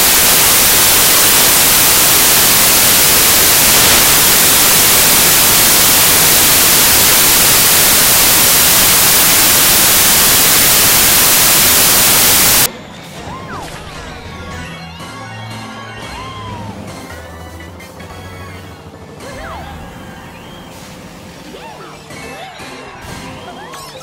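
From the start to 12.66 s, the audio suffers from samples built from the wrong bytes. The reader assembles each sample incorrectly. The bytes are misaligned or swapped. So the rapidly changing low-order bits land in the high-order position. They then dominate every value. The result is loud, harsh broadband noise.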